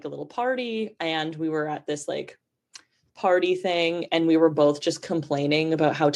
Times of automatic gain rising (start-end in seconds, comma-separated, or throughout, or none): 0.05-2.36, 3.02-6.11